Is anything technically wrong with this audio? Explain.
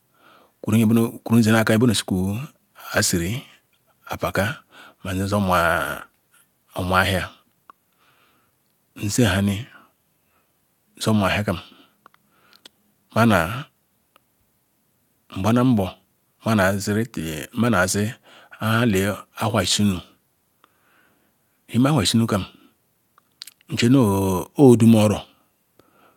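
No, nothing technically wrong can be heard here.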